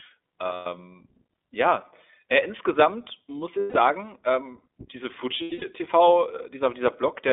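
Throughout, the speech sounds thin, slightly rough and synthetic, with nothing below about 300 Hz or above 3.6 kHz. This is the iLBC codec at work: a narrowband VoIP coder that squeezes the signal into a telephone band and codes each short frame's excitation on its own. The texture fits 20 ms frames at around 15.2 kbps, and the coding damage is plainly audible rather than subtle.

At 0.54 to 0.66 s, 3.58 to 3.77 s and 5.38 to 5.64 s, the speech briefly turns into a held, faintly buzzy, breathy vowel before snapping back to normal. These are lost iLBC frames. When packets go missing, the decoder repeats the last pitch cycle blended with noise. The three gaps last about 120, 160 and 200 ms, which fits six, eight and ten missing frames. The last loss is broken up across about 240 ms, with its longest unbroken run around a tenth of a second. Recovery is almost immediate each time because every frame decodes independently.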